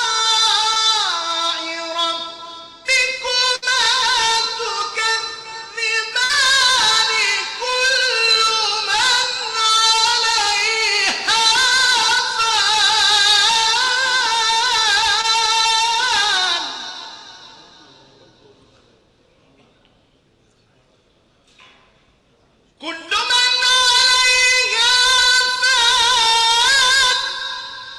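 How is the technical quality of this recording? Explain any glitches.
The recording has four network glitches: two brief dropouts and two longer bursts of lost audio.

Short concealed packet loss occurs at 0.73–0.77 s and 15.21–15.25 s. About 20 ms of audio failed to arrive in time, so the receiver extended the preceding sound to cover the gap before blending back. Each sounds like a quick smear or wobble.

A burst of packet loss occurs at 3.55–3.64 s and 6.24–6.31 s. Roughly 60 ms of consecutive audio went missing each time. The receiver prolonged and faded the last sound, heard as a brief held buzz or hiss, then resumed with that stretch skipped.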